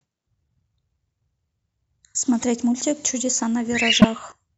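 At 2.40 to 2.43 s, a corrupt frame decoded produces a short glitch. Damaged bits in a few compressed frames were played anyway, misplacing energy in frequency. A louder error, peaking around -5 dBFS, follows at 4.01 to 4.05 s.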